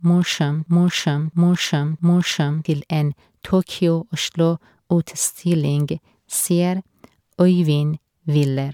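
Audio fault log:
0.00–2.65 s, broken-record loop: the clip opens mid-loop, with a fragment of about 0.66 s played back to back three times with identical timing and content before normal sound resumes at "til en". Unlike a stutter or a dropout, nothing is missing within each repeat; the same slice is simply recycled exactly while the audio that belonged there is lost. The likely cause is a player, encoder or stream that stalled and kept resending its last buffered fragment.
throughout, generation loss: the speech has a swirly, hollow, smeared quality, with consonant attacks blurred, worse than a single MP3 pass at around 140 kbit/s would produce. A single low-bitrate encode gives even, steady artefacts, while this degradation sounds compounded, with quantisation noise and spectral gaps that have built up. That points to likely repeated MP3 decoding and re-encoding, about seven generations, each pass requantising on a shifted frame grid and adding fresh damage.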